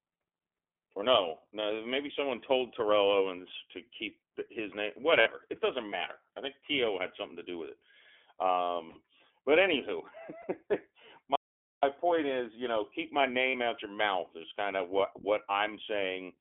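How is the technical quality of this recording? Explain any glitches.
The technical quality is poor. The speech is heavily coded, and it breaks up in several places.

The iLBC codec shapes the whole recording. Only about 250 Hz to 3.4 kHz passes, so the speech sounds thin and boxy. Each short frame is coded on its own. That gives the voice a plainly audible rough, synthetic edge.

There are four short patches of lost iLBC frames. They fall at 5.20–5.28 s, at 8.88–8.98 s between "to do with it" and "but anywho", at 10.42–10.45 s, and at 13.50–13.56 s between "you know keep my" and "out your mouth is". They last between about 20 and 80 ms. The decoder fills each gap by repeating the last pitch cycle mixed with noise. You hear a brief buzzy, held vowel. Clean speech returns at once.

An audio dropout to silence runs from 11.36 to 11.83 s, just before "point is you know". For nearly half a second the sound cuts to total silence, with no room tone. 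The input was likely lost or muted while recording continued, so that stretch is gone.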